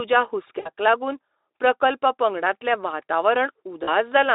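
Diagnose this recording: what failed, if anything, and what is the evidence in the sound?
Network stage: VoIP packet loss concealed by the speech codec, at 0.59–0.69 s just before "लागून प्रकल्प पंगडातलें", and 3.83–3.91 s. The Speex decoder stretches its last pitch and filter into a fading buzzy tone or coloured noise across gaps of about 60 ms and 40 ms, which fits three and two lost 20 ms frames.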